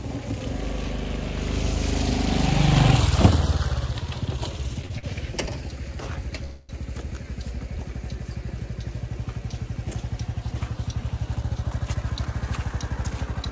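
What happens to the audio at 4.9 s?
At 4.9 s the audio stutters. Repeated stalls run from 4.82 to 5.05 s. Packets arrived late, so the jitter buffer emptied four times. The receiver stretched the last sound through each gap, the longest 44 ms. Nothing is lost, but the audio drags.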